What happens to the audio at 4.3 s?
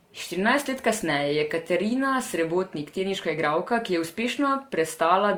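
At 4.3 s the speech carries the same layered smear heard across the whole clip: transcoding between lossy codecs, likely an MP3 pass followed by Opus. The second encoder spends bits re-coding the first one's artefacts and adds its own, so both kinds of swirl overlap, with nothing above 20.3 kHz.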